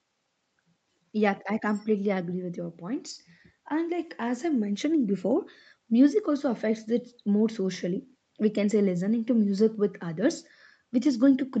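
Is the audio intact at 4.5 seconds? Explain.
Yes, the speech at 4.5 seconds is intact, with nothing there beyond the ordinary call-path band limit that keeps the sound below about 8 kHz.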